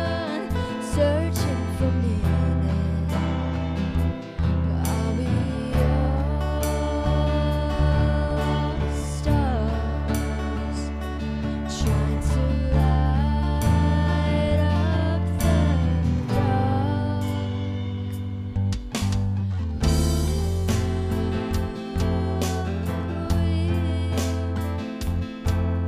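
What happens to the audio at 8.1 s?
Nothing goes wrong at 8.1 s: the audio plays through that moment intact, with no dropout, click or other fault.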